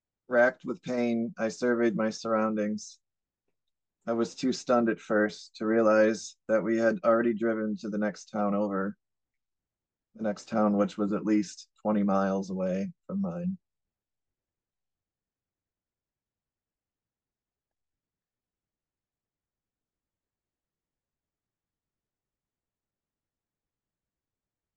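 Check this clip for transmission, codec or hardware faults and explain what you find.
Nothing wrong found in the transmission, codec or hardware path of this speech recording.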